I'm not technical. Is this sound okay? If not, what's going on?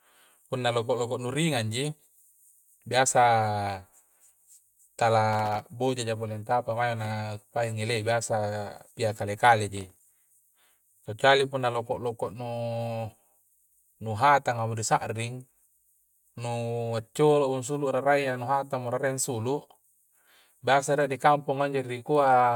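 No. Around 5.33 to 5.69 s and 9.77 to 10.12 s there's processor overload crackle: the computer fell behind, dropping tiny slivers of speech into silence, so it sounds gritty.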